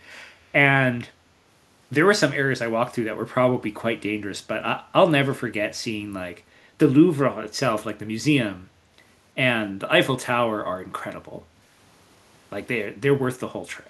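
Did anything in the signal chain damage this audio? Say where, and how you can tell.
Yes. The damage sits in call processing: an echo leak from 0.13 to 0.23 s, a very faint delayed copy of the speech arriving about 338 ms late. This is likely a far-end echo canceller failing to fully subtract its loudspeaker's pickup, returning the residue.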